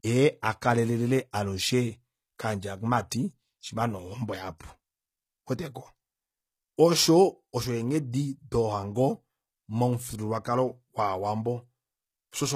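From the start to the end, the speech carries a gritty, metallic treble, with sibilants sounding lispy and nothing at all above 14.9 kHz. This is likely HE-AAC compression at a low bitrate, around 20 kbps by the sound of it: the upper band is not the original but is rebuilt from copied lower bands, so its harmonics fail to line up. Plain low-pass filtering would make the sound dull, whereas here it stays bright but false.

At 4.58 s, right after "shima nee ohombo", a brief hiss of about 19 ms leads into the next attack, which sounds softened. This is pre-echo. The codec spread quantisation noise across a whole transform block, so noise meant for the loud onset leaked into the silence just before it. A click or dropout would break the sound, but here a short hiss precedes the attack. The same happens at 8.12 s, about 17 ms just before "dohango momufyuululwakalo".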